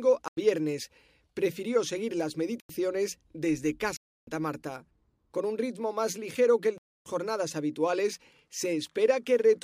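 Four blocks of digital silence hit this speech, each cutting out hard and back with no fade. The first two, at 0.28 to 0.37 s and 2.60 to 2.69 s (right after "seguir las"), last about 93 ms each, which fits a 4096-sample buffer not being filled in time. Longer holes follow at 3.97 to 4.27 s and 6.78 to 7.06 s, the latter between "más ligero que el" and "jornadas habituales".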